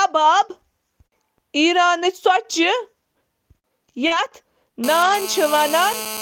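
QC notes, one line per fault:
2.35 s, 4.10–4.20 s, 5.00–5.14 s: lost packet rebuilt from error correction. Packets went missing and the decoder played low-bitrate copies from the following packet, so there are no gaps, but 20, 60 and 80 ms of audio sound rougher and noisier.
4.07–4.12 s: short concealed packet loss. About 40 ms arrived too late; the receiver extended the preceding sound for 30 ms, then blended back, giving a brief smear or wobble.
4.84 s to end: GSM phone buzz. A nearby 2G phone in a call pulses at 217 Hz, and the audio circuit rectifies it into a steady, raspy, harmonic-rich buzz about 11 dB below the signal.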